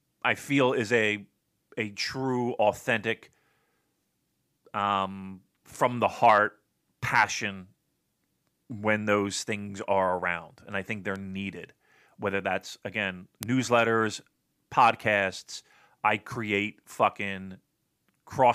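A single flipped bit in memory or on a digital link makes sample values jump by a power of two and snap back, producing a bit error spike: one broadband tick at -26 dBFS at 11.16 s after "and I think they're", then a far louder one at -2 dBFS at 13.43 s, before "newsletters podcasts I create".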